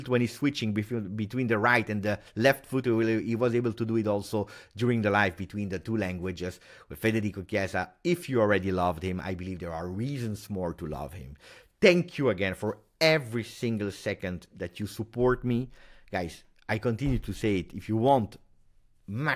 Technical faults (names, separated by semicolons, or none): none